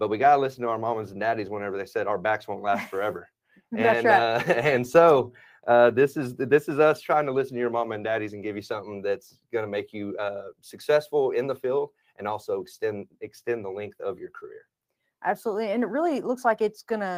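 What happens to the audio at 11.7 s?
Nothing goes wrong at 11.7 s: the audio plays through that moment intact, with no dropout, click or other fault.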